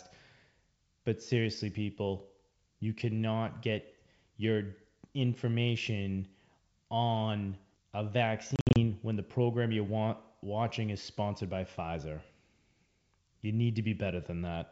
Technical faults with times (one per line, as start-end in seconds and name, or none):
8.56-8.81 packet loss on an ADPCM call